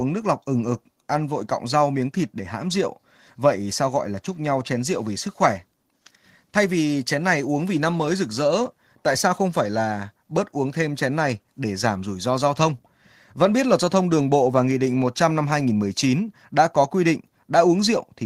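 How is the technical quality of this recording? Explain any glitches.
No glitches can be heard anywhere in the recording; the signal stays steady and intact throughout, with no dropouts, interruptions or other technical faults to explain.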